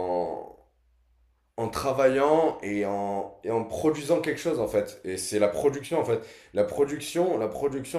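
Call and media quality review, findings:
Nothing stood out on listening to the speech recording, and no issue is logged against it.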